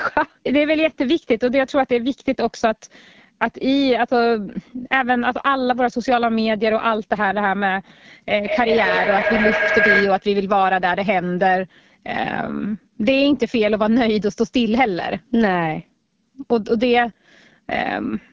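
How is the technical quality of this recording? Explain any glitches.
The quality is compromised: the speech is rough all the way through, and a feedback howl breaks in partway.

The AMR wideband (HD Voice) codec runs for the whole clip at a rate that fits 8.85 kbit/s, one of its two lowest modes. At that rate the pulse-driven model of the voice can't keep up, so the speech comes out plainly raspy and rough, with the top band filled by shaped noise rather than real detail.

From 8.34 to 10.33 s there's a feedback howl. Two devices on the same call in one room formed a loop that gained level each trip. It narrows to a tone around 1.5 kHz, with repeats roughly every 150 ms, and peaks about 2 dB above the speech. Nothing shows above 8 kHz, in line with the call's microphone processing.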